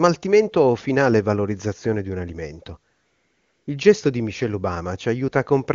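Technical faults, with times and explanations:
2.93 to 3.67 s, AMR comfort noise: right after "valorizzazione di un alimento" the phone judged the talker silent and stopped sending speech frames for 740 ms. The receiver filled the gap with synthetic noise built from a coarse level and spectrum description, so a steady, smooth hiss replaces the real background and switches in and out at the edges.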